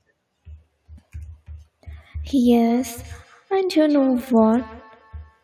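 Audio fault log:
2.17–5.43 s, feedback echo between two devices: from here to the end the speech is trailed by a thin, ringing copy of itself, returning roughly every fifth of a second at about 20 dB below the direct sound. A second device in the same room is playing this microphone's signal back out of its speaker, and the microphone picks it up again. Each device's echo canceller only removes what that device plays itself, so the repeat passes through.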